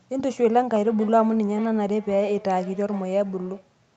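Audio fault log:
0.73–3.74 s, feedback echo between two devices: the speech returns as a delayed copy roughly every 0.4 s, peaking at about 18 dB below the direct speech and sounding thinner and more ringing than the original. Two devices on the same call share a room. One plays the other's transmitted audio and that microphone picks it up again. Neither echo canceller removes sound played by the other device, so the loop sets the fixed spacing. All of this sits within the 8 kHz bandwidth of the call path.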